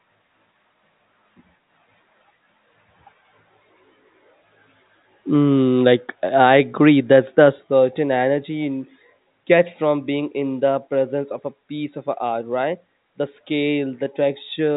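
Nothing goes wrong anywhere in this speech, so there's no technical fault to point to.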